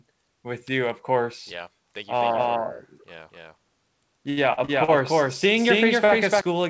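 This speech clip comes through a call path that cuts off everything above 8 kHz, which fits G.722 at 64 kbps, and it carries three faults. From 2.20 s to 6.41 s you get a doubled audio track: a second full-band copy of the speech runs around 300 ms behind at roughly the same level, with no room tail, and it cuts in and out abruptly. It sounds like a flat slapback echo, most likely from the audio being captured twice, once through a slower path. Between 4.30 s and 4.90 s there's a run of repeated stalls (stutter). Packets kept showing up late, so the jitter buffer ran dry four times, and the receiver stretched the last sound to fill the gaps, about 182 ms in all, with the longest gap at 70 ms. That's roughly a third of that stretch spent on filler, so nothing is lost but the speech drags and judders. Then at 6.05 s to 6.11 s there's a short stall from a late packet. One packet missed its slot, the buffer emptied, and about 38 ms of held-over sound covered the hole before playback picked up where it left off, giving a brief smear or slight buzz.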